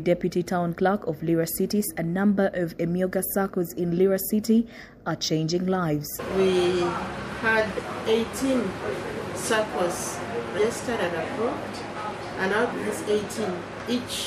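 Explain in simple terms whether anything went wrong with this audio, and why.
Compressed frames were skipped in three places: small blocks of the encoded file, each about 26 ms of sound, never got played, either because they were missing or the decoder threw them out as damaged. You hear the audio suddenly jump forward, losing roughly a third of a second at 1.87 s, about a fifth of a second at 6.18 s, and about 0.15 s at 10.57 s. Each join is a short smeared blip, not a sharp click.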